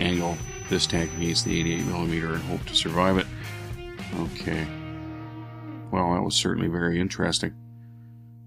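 From the very start until 2.0 s, a feedback whistle sits behind the sound: a thin, steady tone at 6 kHz, roughly 15 dB below the main signal, swelling and fading slowly in level. The likely cause is a loudspeaker-to-microphone loop held just at the edge of feedback, so one frequency rings on without building up. On a spectrogram it appears as a narrow horizontal line at 6 kHz that ends at 2.0 s.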